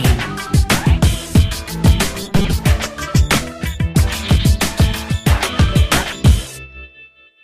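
From about 2.23 to 2.53 s the audio goes robotic, the classic repeated short buffers effect: a rigid metallic buzz at 200 Hz, with roughly half the material being repeats. That fits the likely cause of a starved stream looping a 5 ms buffer.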